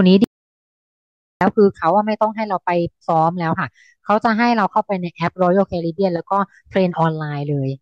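At 0.24 s the speech cuts out abruptly and does not return until 1.41 s, an audio dropout to silence lasting about 1.17 s. The gap is dead digital silence with no room tone beneath it, so the input was likely lost upstream while recording carried on writing silence. On a waveform it shows as a flat line between two hard edges; a spectrogram shows a solid black band across all frequencies.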